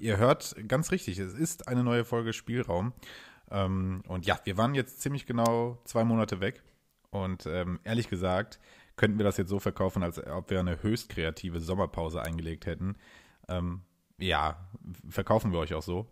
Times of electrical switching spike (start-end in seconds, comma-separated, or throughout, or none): 5.46, 12.25